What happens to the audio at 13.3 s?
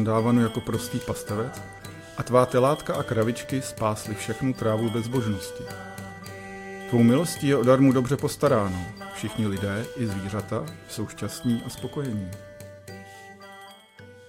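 Nothing goes wrong at 13.3 s; the audio plays through that moment intact, with no dropout, click or distortion.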